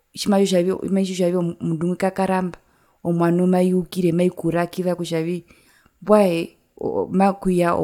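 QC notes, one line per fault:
No audible faults found.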